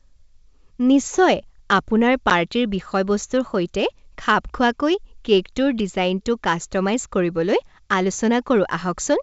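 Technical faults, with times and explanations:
2.30 s, packet loss on an ADPCM call: a lost packet leaves a 10 ms flat-line gap in the waveform. The desynchronised predictor and step size then leave the resumed "বিষয়বস্তুৰ সৈতে খাপ খোৱাকৈ" slightly distorted.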